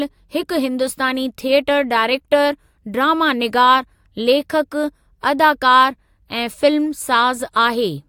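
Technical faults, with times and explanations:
No technical faults can be heard in the speech signal at any point.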